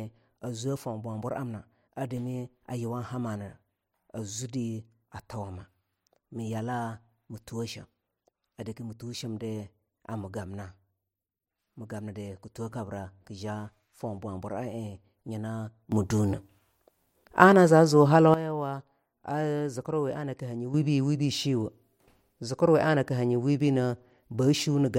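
At 15.92 s the speech and its background noise jump up together by about 12 dB, dropping back at 18.34 s; a second sudden gain jump of about 8 dB starts at 20.74 s and holds to the end. Each is likely an unramped digital gain change, seen as vertical steps in the waveform envelope and abrupt brightening across the whole spectrogram.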